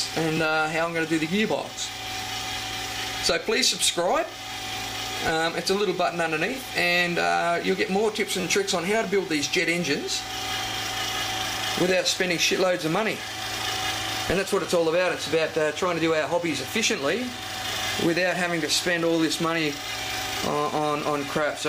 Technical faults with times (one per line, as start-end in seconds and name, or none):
0.37 repeated buffer
8.41-8.44 repeated buffer